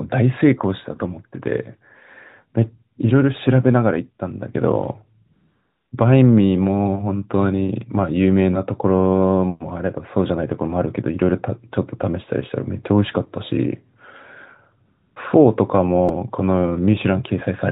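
A speech clip carried over a narrowband AMR mobile link, with everything above 4 kHz absent, shows two kinds of fault. AMR comfort noise appears twice, from 5.26 to 5.92 s (about 0.66 s) and from 14.86 to 15.16 s (0.3 s). In each gap the encoder decided the talker had gone quiet and stopped sending speech frames, so the receiver generated its own noise from a rough estimate of the background's level and spectral shape. The real room sound drops out and is replaced by a smooth, even hiss that switches on and off abruptly at the edges of each gap. A repeated buffer occurs at 16.09 s. The output did not get fresh audio in time and played its last block again, so a tiny slice sounds three times in a row with hard joins. The repeat period is about 2.9 ms, which fits a 128-sample buffer. At that size the repeats merge into a brief click or buzz instead of an audible stutter, and a few milliseconds of real audio are lost.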